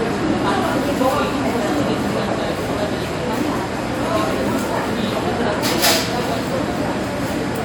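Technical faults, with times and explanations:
Nothing stood out on listening to this recording.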